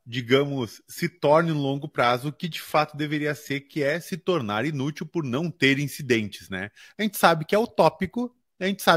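Speech in which the first 4.0 s come from an adaptive stream starting at a low bitrate: treble is synthetic-sounding, nothing above 14.9 kHz, which fits roughly 24 kbit/s HE-AAC. Quality then jumps to fuller AAC-LC, about 96 kbit/s, before "se tornar inútil por", with no gap, unlike a dropout or mid-stream downgrade.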